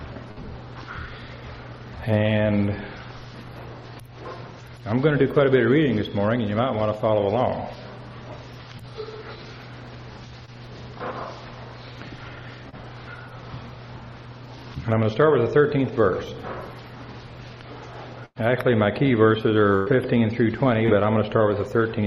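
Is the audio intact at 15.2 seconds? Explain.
Yes, at 15.2 seconds the audio plays through cleanly, with no dropout, click, distortion or other fault at that point.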